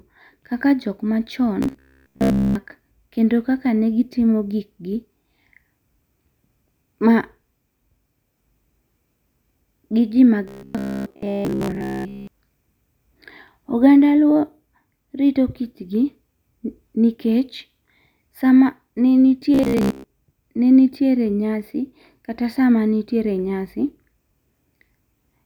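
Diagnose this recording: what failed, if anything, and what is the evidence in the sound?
Robotic sound from repeated short buffers, at the driver or buffer stage, at 1.63–2.55 s (ending just before "kendo kaka ne gi"), 10.48–12.27 s and 19.55–20.04 s. The first stretch is repeated throughout, the later two mostly. The speech becomes a rigid metallic buzz at 66.8 Hz, which fits a repeated chunk about 15 ms long. Audio likely arrived too late, so the last chunk was looped while real audio was skipped. A codec warble would follow the voice's pitch, but this buzz stays fixed.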